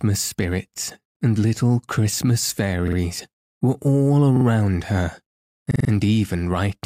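Speech with four short stutters, each a 46 ms fragment sounding again with a hard join: once at 1.16 s, just before "and little"; twice at 2.88 s; twice at 4.37 s, after "were all"; and four times at 5.71 s. This is a repeated buffer. New audio arrived late, so the device replayed its last block, which fits a 2048-sample buffer.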